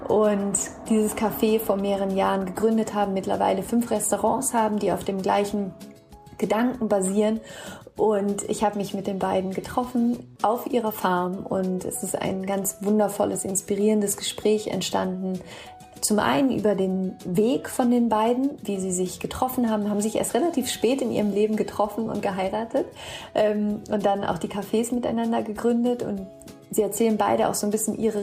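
Nothing in this recording stands out as a technical fault, so there's really nothing to flag here.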